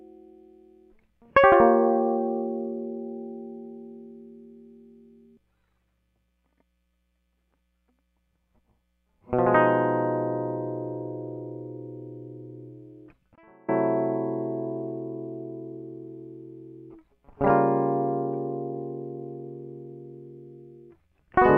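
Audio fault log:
13.36–13.68 s, audio dropout to a faint residue: the music cuts out abruptly for about 0.32 s, leaving only a faint leak roughly 35 dB below normal, likely from a signal loss upstream while the path stayed live. Unlike a fade or musical rest, both edges are instant and the gap is not silent.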